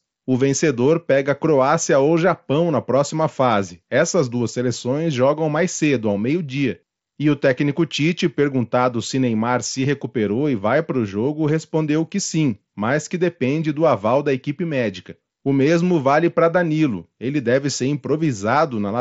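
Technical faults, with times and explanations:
No technical faults are heard in this clip.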